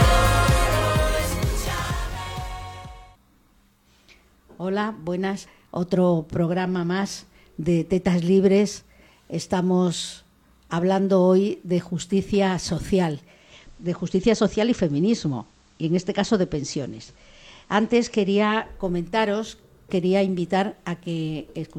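Digital radio blending to analogue occurs from 13.15 to 18.82 s: the receiver lost its digital stream and cross-faded over 446 ms to the station's FM broadcast. Hiss rises, roughly 40 dB below the signal, until it blends back, with level unchanged.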